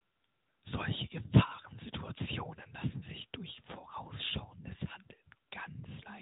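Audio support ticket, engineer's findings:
Nothing faulty turned up on a listen through the speech here, so there's nothing to log against this one.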